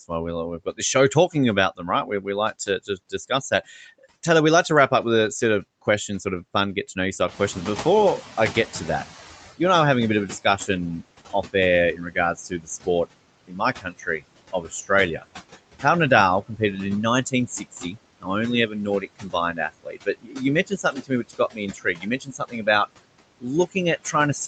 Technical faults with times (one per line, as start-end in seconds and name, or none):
0.00-24.47 noise suppressor artifacts
0.65-4.05 speech cut by the noise suppressor
7.28-10.39 noise suppressor catching up
10.28-10.69 speech cut by the noise suppressor
11.33-15.26 speech cut by the noise suppressor
15.80-16.61 speech cut by the noise suppressor
17.30-22.68 speech cut by the noise suppressor
23.40-24.47 speech cut by the noise suppressor